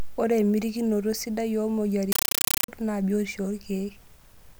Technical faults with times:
2.12-2.68 compressed stream played as audio

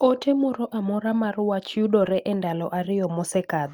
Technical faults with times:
2.01-2.15 lost packet rebuilt from error correction

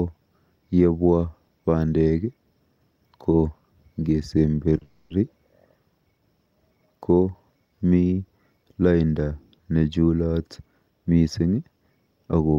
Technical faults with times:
4.78-4.82 short stall from a late packet
4.82-5.19 call audio freeze

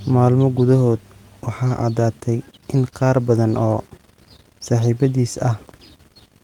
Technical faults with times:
none

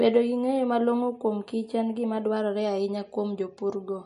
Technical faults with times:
0.00-4.06 MP3 compression
0.00-2.36 channel delay (comb filtering)

